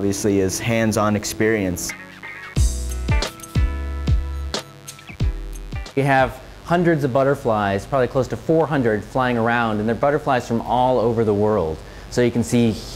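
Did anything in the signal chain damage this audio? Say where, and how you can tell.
Yes. The damage is in the analogue wiring. A mains buzz runs through the whole clip, from start to finish. It is a steady, raspy tone sitting around 25 dB below the signal. Its fundamental is 50 Hz, with harmonics stacked well up into the kilohertz range. That spiky spectrum points to switching pulses, twice per mains cycle, from a dimmer or rectifier. They leak into an unshielded or poorly grounded line before conversion.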